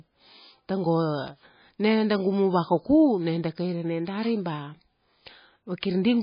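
Speech, and the whole thing has nothing above 5 kHz, so it sounds dull and boxed-in from start to finish. There's a watery, swirly quality running through it too, with faint detail flickering in and out as weak frequency components get dropped frame by frame. That's heavy damage, most likely from MP3 compression starved of bits; the treble cut and the amount of smearing fit a bitrate somewhere around 18 kbps.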